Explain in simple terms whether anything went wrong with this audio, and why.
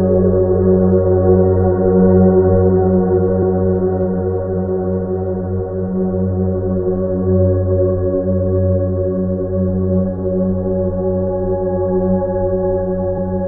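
Two short glitches here, both from damaged data in a compressed stream. Right at 3.42 s there's a tiny blip, and again from 13.14 to 13.19 s you get a slightly longer glitch. What's going on is that some of the compressed file got mangled, so the decoder can't make sense of that stretch, loses its place, and spits out garbage for a moment until it finds the next clean frame to latch onto.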